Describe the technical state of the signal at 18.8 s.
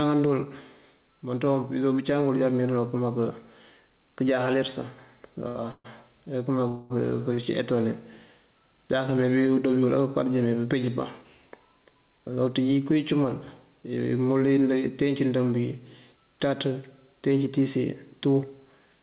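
At 18.8 s the speech sounds hurried without any change in pitch. This is jitter buffer speed-up, running from 17.61 s to 19.01 s at about 110% speed. The receiver's buffer had built up more audio than it targets, so it trimmed short slices of one or a few pitch periods, again and again, removing around 150 ms in total to pull the delay back down. The tempo compresses while the pitch stays put.

Underneath that, the level breathes, with a swing of about 5 dB, and loud and soft parts sit closer together than they should, giving a squashed feel. This is gain pumping, likely caused by gain set too high for the microphone, with a fast limiter or compressor clamping down on every peak. It runs through the whole clip, so it is present at this moment too.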